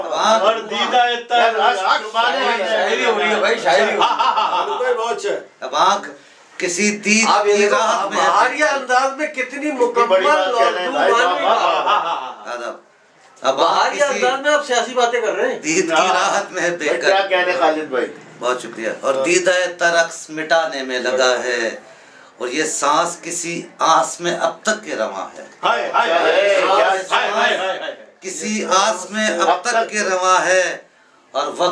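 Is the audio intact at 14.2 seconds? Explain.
Yes, at 14.2 seconds the audio runs continuously with no dropout, click, distortion or other fault.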